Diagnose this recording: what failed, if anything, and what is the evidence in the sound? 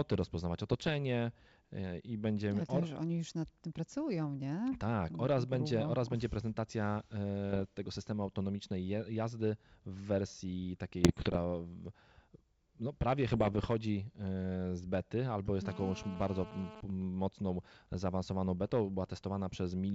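Bit errors on an ADPCM link, in the network or transmission stage, show at 0.71–0.93 s, 7.50–7.66 s, 11.02–11.37 s and 13.27–13.70 s as pops and rough bursts with brief level jumps. Each flipped bit upsets the decoder's step size and predictor, so the damage rings on for milliseconds rather than leaving the clean gaps of packet loss.

GSM phone buzz, picked up in the analogue wiring, runs from 15.65 to 16.81 s at about -15 dB relative to the speech. It is a hard, raspy 217 Hz buzz with dense harmonics, steady as from a phone in a call. That pitch and texture rule out 50 or 60 Hz mains hum.

GSM signalling bursts follow from 16.90 to 19.67 s at a lower level, roughly -30 dB. The same 217 Hz rectified interference now arrives as even ticks with a longer buzz twice a second, as when a phone's user falls silent in a call. The intermittent rhythm separates it from the continuous buzz before it.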